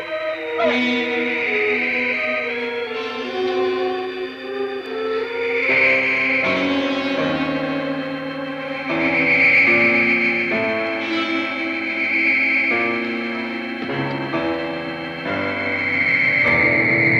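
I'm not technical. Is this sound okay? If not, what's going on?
No. The recording software most likely fell behind for a moment, twice, and a tiny slice of sound, around a fiftieth of a second each time, was overwritten before it could be saved. This is called a dropped buffer (overrun). The sound on either side is then stitched together with no gap, so you hear a slight jump forward, at 4.86 s and again at 16.48 s.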